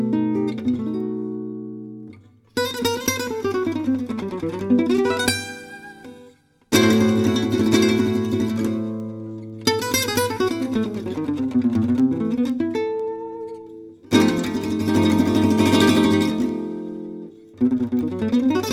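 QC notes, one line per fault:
0.50–18.49 s, word clock ticks: sharp ticks about every half second as an unlocked receiver slips one sample, which fits a clock offset near 40 ppm.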